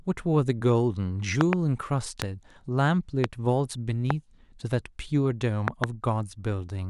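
At 1.41–1.55 s a loud pop arrives as a double thump, followed by single pops at 2.22–2.24, 3.24–3.26 and 4.10–4.13 s, and another pair at 5.68–5.86 s. Each peaks at about 20 dB above the speech, which continues beneath it. The likely cause is an abrupt voltage step or spike, from a connector, switch, static discharge or driver glitch, added to the signal and shaped into a short, sharp transient by the circuitry downstream.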